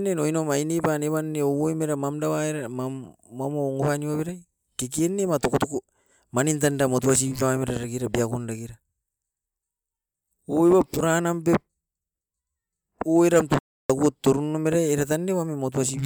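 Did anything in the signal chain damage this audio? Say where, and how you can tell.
Yes, at the playback stage. Speech cuts to complete silence from 13.59 to 13.90 s, about 305 ms, then resumes: a playback stall, likely the player starving for data or its thread being blocked. A silent gap this long, without garbled fill, separates it from packet-loss concealment.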